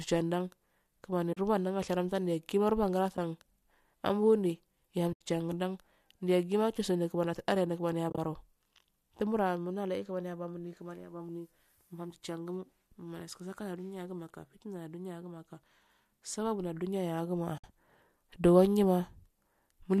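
AAC frame loss with muting occurs at 1.33–1.37 s, 3.17 s, 5.13–5.21 s, 8.10–8.18 s just after "yaggima chusende kimaniyatasiya" (broken into short gaps of about 30 ms at most), and 17.58–17.64 s. Coded frames went missing and were zeroed, so the overlapping windows fade the speech out and back in, leaving soft-edged holes. The 10 ms granularity fits short low-delay frames, likely from AAC-ELD.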